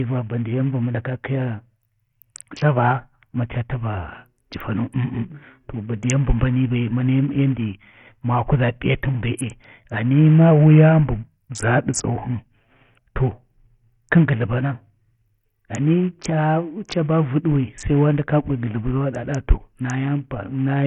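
From start to finish the speech carries heavy damage that points most likely to Bluetooth SBC compression at a starved bitrate near 48 kbps. Nothing survives above 11.4 kHz, so a spectrogram shows a hard ceiling there, with flickering gaps below it and a gritty, aliased haze over consonants.

From 10.51 to 12.34 s the sound slows by about 5.4% and drops roughly 95 cents, nearly a semitone, then snaps back. This is a drift correction step, likely a clock-matching rate jump. On a spectrogram the harmonics shift down together for that span.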